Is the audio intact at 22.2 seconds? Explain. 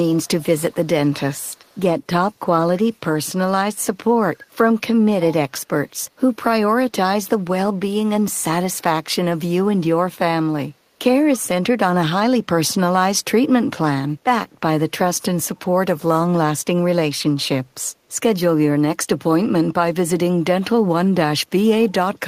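Yes, at 22.2 seconds the audio is intact, with no fault to be heard at that moment.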